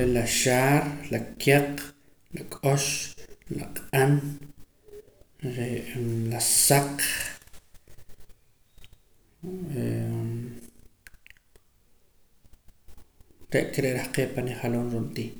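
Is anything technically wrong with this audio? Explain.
No, nothing technically wrong can be heard in this speech recording. The signal comes through without any fault worth pointing out.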